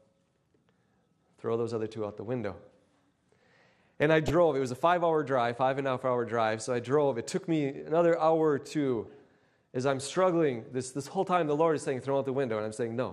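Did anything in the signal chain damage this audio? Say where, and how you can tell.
Yes. The codec stage: dull, granular, gurgling sound throughout with flickering upper bands, likely MP2 compression starving sub-bands of bits, which fits a low rate near 80 kbps.

In reception, DAB burbling appears as brief noise blips at 4.27 to 4.30 s and 8.96 to 9.06 s, where bit errors at roughly 0.3% and 0.15% got past the error correction and corrupted samples in single sub-bands.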